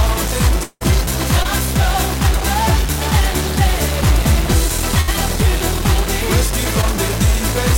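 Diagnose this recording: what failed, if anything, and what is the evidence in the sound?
Stuck bit, throughout: distortion sits on all the audio and pauses fill with noise, likely a data line stuck at the converter or wiring.

Long network dropout, 0.63 to 0.83 s: the last sound is stretched and fades for about 0.17 s, then about 30 ms of silence. This is likely network loss, and about 0.18 s of audio never returns.

Short concealed packet loss at 1.43 to 1.47 s and 6.81 to 6.84 s: brief smears where the decoder papered over about 20 ms of missing network audio each time.

Burst of packet loss, 5.01 to 5.09 s: the last sound is held and dimmed, covering about 60 ms of consecutive network packets lost or arriving too late, then playback resumes further on.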